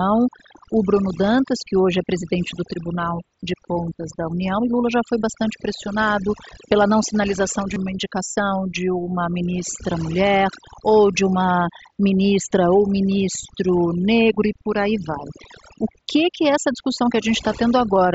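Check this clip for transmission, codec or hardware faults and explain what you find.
Two faults stand out: overdone noise removal across the whole recording, and one brief concealed Bluetooth headset packet loss.

The overdone noise removal runs from start to finish. A noise reduction stage was pushed too hard on noisy audio. It cuts individual frequency bands whenever they sit close to its noise estimate. Quiet parts of the speech get cut along with the noise. The gaps between phrases drop in level and break up into small twinkling specks.

The concealed Bluetooth headset packet loss falls at 7.74 to 7.76 s, between "pela não sinalização de" and "uma indicação de uma". About 22 ms of audio went missing between headset and phone, which fits roughly three lost frames. The receiver filled the hole by repeating the best-matching slice of recent waveform. Because three frames were lost in a row, it is not fully masked. 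A buzzy hold at full level and a slight warble mark where real audio resumes. The mSBC link carrying the speech to 8 kHz adds only light graininess.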